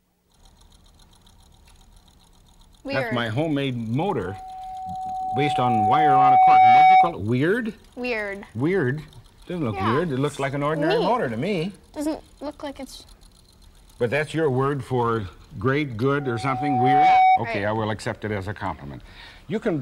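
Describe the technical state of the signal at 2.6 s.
Nothing is wrong with the signal at 2.6 s; it passes through that point intact, with no fault audible.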